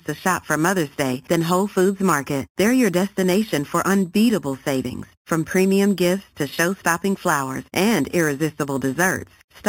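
Right through the speech there's imaging from sample-and-hold upsampling. It's a bright metallic fizz about 16 dB below the voice, mirrored into the 4 to 8 kHz band. That fits 8 kHz audio raised by repeating samples with no smoothing filter.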